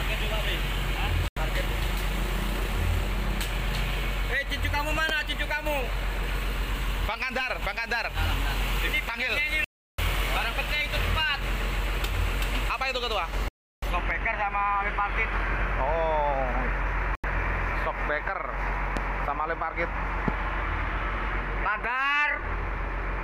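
At 1.28 s, 9.64 to 9.98 s, 13.48 to 13.82 s and 17.15 s, blocks of digital silence cut the audio to nothing. These are 85 ms and 341 ms gaps, consistent with 4096- and 16384-sample buffers left unfilled. Loud pops at 5.09, 18.97 and 20.28 s are single sharp thumps about 15 dB above the signal, likely from a voltage spike. Unlike the silences, the sound carries on underneath them.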